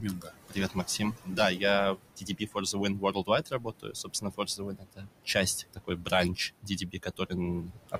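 A noise suppressor is working hard throughout this speech recording, pulling the room noise down by about 21 dB wherever it judges a band to be steady noise; that noise, which sits only about 13 dB below the speech, sinks in the gaps and returns under the words. The same processing also mistakes parts of the speech for noise and cuts them, at 0.0–1.39 s, 2.17–2.77 s, 2.94–5.09 s, 5.74–6.12 s, 6.62–7.33 s and 7.61–7.99 s, with drops of about 16 to 22 dB. Within each stretch, parts of the speech sound swallowed or faint, adding up to around one and a half seconds in the longest stretch.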